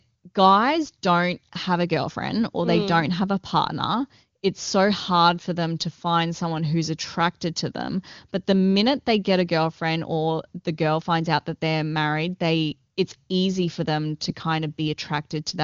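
No technical faults detected.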